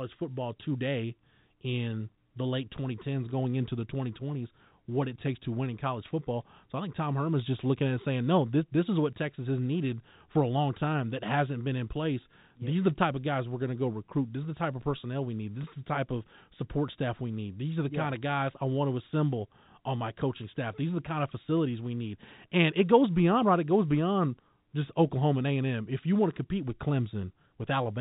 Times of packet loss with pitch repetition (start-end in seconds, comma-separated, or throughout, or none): 15.63, 27.22